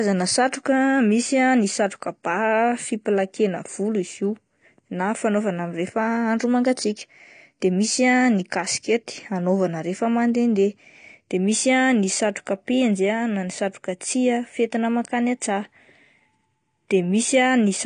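Low-bitrate AAC compression is the likely cause of what runs through this whole speech clip: the encoder appears to have been starved of bits, which fits AAC-LC at around 32 kbps, so it dropped the top of the spectrum and quantised the rest coarsely. Nothing is left above about 9.7 kHz, so the speech sounds dull and closed-in, and the coarse coding is plainly audible as a smeared, warbly texture on held sounds and a fizz on sibilants.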